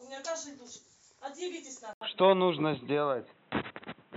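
At 1.93 s there's a short gap of about 80 ms, then the speech turns dull and boxy to the end, with nothing above 3.9 kHz, a level shift of a few dB and a faint new hiss underneath. That's likely the input switched to a poorer device.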